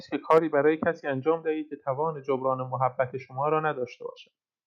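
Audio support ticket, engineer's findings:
Microphone overload, 0.30 to 0.38 s: harsh crackle on loud peaks, tops flattened, about 4 dB over full scale, roughly 7 percent of samples clipped. Likely mic preamp gain set too high, driving the converter past its limit.

Microphone volume stepped down, 0.38 s: abrupt level drop of about 4 dB, speech and background together, right after the clipped peak. Likely the call software's automatic input-gain control cutting device volume in one step after detecting clipping.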